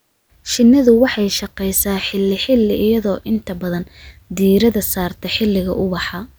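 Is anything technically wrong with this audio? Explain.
No, nothing technically wrong is audible in this recording.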